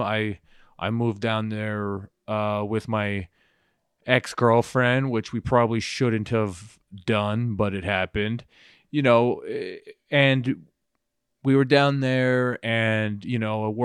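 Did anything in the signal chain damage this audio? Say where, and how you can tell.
No, nothing in the chain has left a mark on this speech that I can hear, so there's no damaged stage to point to.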